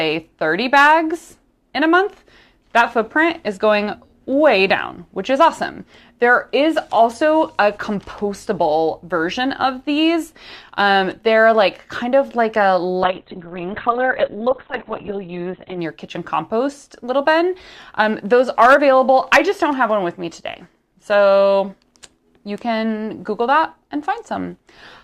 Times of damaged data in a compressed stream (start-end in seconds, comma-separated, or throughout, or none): none